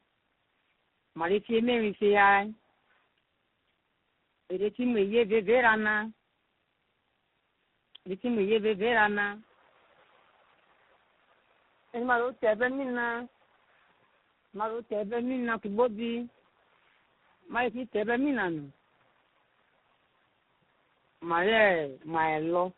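From start to finish, the speech carries tandem speech coding. It sounds as if the call crossed several networks and was decoded and coded again at each one, likely low-rate mobile coding twice with a final ADPCM-style stage on top. Each coder chews on what the last one already mangled, so the damage stacks: the speech is rough and warbly, with that smeared, underwater quality, and muffled. Nothing gets through above about 3.9 kHz.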